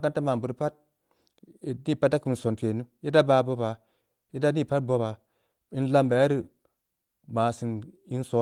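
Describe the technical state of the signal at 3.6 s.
At 3.6 s the signal is intact, with no fault present; the Opus voice compression running in hybrid mode at 24 kbps leaves the speech there full-band, with only light coding damage.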